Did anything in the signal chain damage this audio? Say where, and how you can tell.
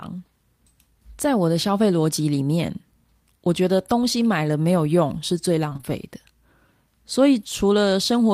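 Yes. The network stage damaged this speech. From 5.69 to 5.85 s there is a burst of repeated packet loss (robotic sound): four short holes, the longest about 22 ms, each patched by extending the preceding sound, so roughly half of that stretch is concealment rather than real signal. It comes out choppy, with pieces missing. Because concealment fills each gap instead of leaving silence, this is packet loss rather than a dropout or buffer underrun, which would give hard gaps or clicks.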